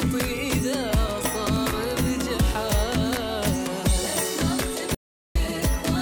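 At 4.95 s an audio dropout to silence cuts the sound to silence for 0.41 s, likely a lost input link, before resuming at 5.35 s.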